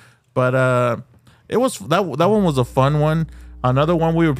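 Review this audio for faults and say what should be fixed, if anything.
Mains hum at 60 Hz enters from 2.35 s to the end, roughly 20 dB below the speech. It shows on a spectrogram as a steady horizontal line. Fix the ground loop or move cabling away from transformers.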